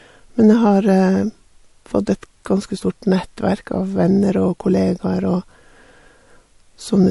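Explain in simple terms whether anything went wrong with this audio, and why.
Something did go wrong: the speech has a watery, swirly quality from start to finish, and there's no treble above about 11.3 kHz, so it sounds dull. That's likely MP3 compression squeezed hard enough that the encoder dropped the top end and the faint detail.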